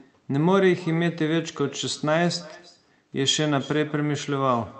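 Throughout the speech, an echo with no canceller trails each phrase by roughly a third of a second, about 23 dB below the direct sound and thinner. A spectrogram shows faint delayed copies of each syllable's harmonics beneath the Opus call band, which tops out at 8 kHz.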